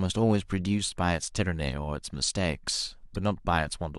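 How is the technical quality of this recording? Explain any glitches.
One glitch occurs, at 3.15 s. Damaged data in the compressed stream throws the decoder out of sync while it hunts for the next frame, leaving a brief chirp, squawk, click or short hole in the speech.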